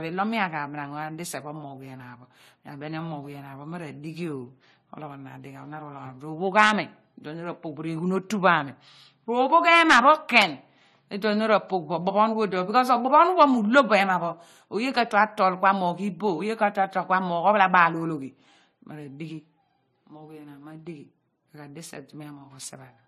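Speech runs its whole length with nothing above 14 kHz and two layers of coding damage at once: the artefacts of a low-rate MP3 heard together with those added by AAC-LC. That is likely transcoding between lossy codecs, consistent with an MP3 at around 44 kbit/s re-encoded to AAC-LC at around 48 kbit/s. A single pass through one codec would give only one artefact texture.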